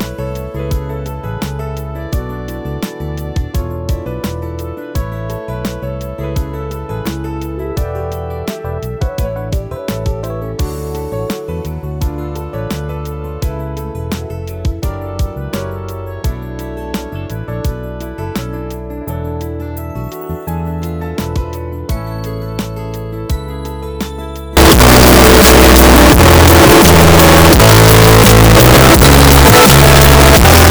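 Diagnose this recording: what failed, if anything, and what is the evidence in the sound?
Likely signed and unsigned mixed up at sample-format conversion, 24.57 to 30.70 s: the sound turns loud and harsh, quiet stretches included, because each 16-bit sample's flipped top bit throws zero crossings across the full range.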